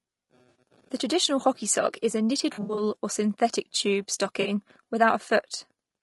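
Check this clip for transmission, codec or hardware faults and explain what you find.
The speech carries a constant codec coloration and three brief dropouts patched over by the decoder.

Low-delay AAC compression runs throughout, likely AAC-ELD at a rate near 32 kbps. Its short frames resolve pitch harmonics poorly on a tight bit budget, so the voice comes across plainly rough and grainy, with noise filling the gaps between harmonics and a dulled, synthetic-sounding top band.

AAC frame loss with concealment hits at 0.49 to 0.55 s, 2.53 to 2.83 s and 4.41 to 4.47 s. Missing frames were rebuilt from the last good spectrum, so each gap sounds like a smeared, noisy, phasey patch. The middle one is scattered across about a quarter second, its longest run around 70 ms.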